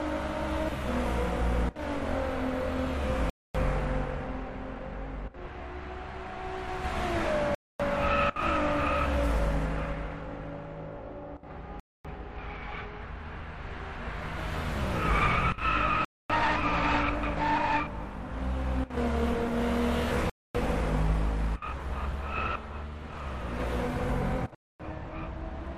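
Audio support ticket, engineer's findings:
Gap between chunks: 4 s chunks joined with 250 ms of inserted silence, so the sound drops out with hard edges at 3.30, 7.55, 11.80, 16.05, 20.30, 24.55 s.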